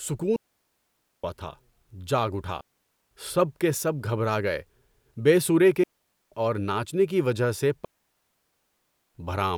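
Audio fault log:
0.36–1.24 s, 2.61–3.11 s, 5.83–6.32 s, 7.85–9.15 s: digital wireless dropouts. The receiver mutes cleanly for 0.5–1.3 s each time after losing the link's data, leaving near-silent holes with no noise bursts.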